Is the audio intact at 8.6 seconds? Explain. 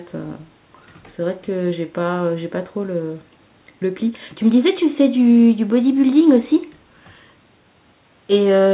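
Yes, the speech at 8.6 seconds is intact, carrying only the narrow, telephone-like band of the call path, with nothing above 4 kHz, which is normal for that route rather than a fault.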